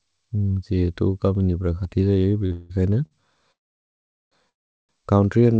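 Speech heard through a wideband call path, with nothing above 8 kHz, consistent with G.722 at 64 kbps, and interrupted by two kinds of timing fault. Two short stalls from a late packet occur at 2.46 to 2.52 s and 3.06 to 3.22 s. In each, the jitter buffer ran dry, and the receiver held the last sound for 43 ms and 52 ms respectively, stretching it before resuming at the same point, so nothing is lost. Three call audio freezes also occur. At 2.52 to 2.72 s the first stall runs straight into a 174 ms freeze where the held sound decays but never reaches silence. At 3.52 to 4.34 s a 797 ms freeze is almost entirely silent, about 780 ms of dead air. At 4.50 to 4.91 s a 393 ms freeze contains about 390 ms of silence. The likely cause is packets held up in transit, emptying the buffer. After each freeze the audio continues from where it stopped, so the gaps are inserted rather than cut out, and the later speech is pushed back by the accumulated delay.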